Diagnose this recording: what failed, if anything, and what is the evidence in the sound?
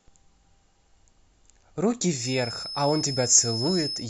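Feedback whistle from 2.08 s to the end of the clip: a thin, steady tone at 5.2 kHz sits under the speech, roughly 10 dB below it, swelling and fading slowly in level without growing. The likely cause is an acoustic loop at the playback and capture stage, with the loudspeaker's output re-entering the microphone at a gain just under runaway, so one frequency keeps ringing instead of building into a full howl.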